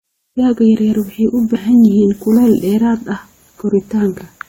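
At 1.54–1.57 s, compressed frames are skipped: roughly five 23.2 ms frames drop out, so the speech jumps ahead about a tenth of a second, visible as a spectrogram discontinuity.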